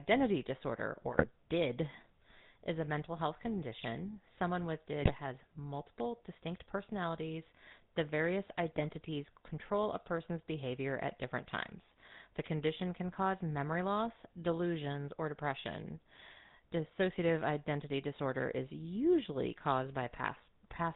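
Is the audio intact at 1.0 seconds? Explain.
No. From 0.96 to 1.26 s the speech breaks into squawks, pops and a gargling smear: GSM bit errors. Flipped bits, at about a 1.5 percent error rate, corrupted the decoder's filter, pitch and gain values, warping the spectrum and jolting the level frame by frame.

Underneath, the speech has a buzzy, gravelly roughness and nothing above 4 kHz, the plainly audible sound of the GSM full-rate codec. It fits a 13 kbps coder that rebuilds the voice from a vocal-tract model driven by a sparse, regularly spaced pulse excitation.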